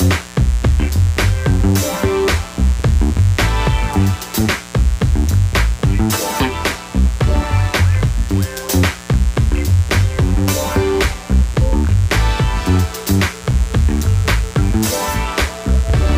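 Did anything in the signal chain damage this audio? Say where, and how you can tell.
Yes, in the analogue wiring. A raspy mains buzz runs through the whole clip, roughly 20 dB below the signal, built on 60 Hz with harmonics climbing into the kilohertz range. Unlike a smooth hum, its edge comes from switching spikes leaking in twice per mains cycle.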